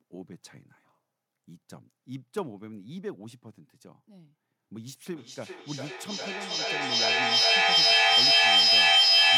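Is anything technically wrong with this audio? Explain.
Yes. From 5.07 s to the end, feedback echo between two devices: a second device's speaker re-enters the microphone, recirculating the speech roughly every 400 ms and building to about 18 dB above it.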